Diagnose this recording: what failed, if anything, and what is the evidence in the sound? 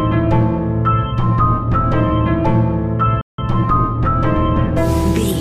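The failure is at the playback stage: a playback stall. At 3.21 s the sound stops dead in mid-flow. The output stays silent until 3.38 s, a gap of about 170 ms. Then the sound returns. The likely cause is the player running out of buffered data, or its output thread being blocked, so nothing reached the output until it recovered.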